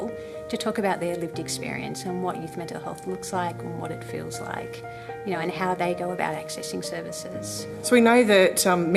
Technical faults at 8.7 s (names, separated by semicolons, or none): none